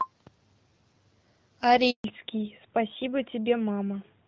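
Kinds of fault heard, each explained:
handover gap: The call was passed from one network link to another, and no speech frames arrived during the switch. At 1.90 s the speech fades out within a few tens of milliseconds. Silence follows for about 140 ms, until 2.04 s. Whatever was said in that span is lost. Nothing is smeared or repeated. The audio simply stops, then resumes on the new link.
fallback to narrowband: Before the break, the speech has the wider band of HD Voice, with only light coding damage that fits the 12.65 kbit/s mode. From 2.04 s to the end, the call runs on an older narrowband codec. Everything above 4 kHz is gone. Sibilants lose their edge and the speech turns duller and rougher. This sound suggests AMR-NB at its top rate.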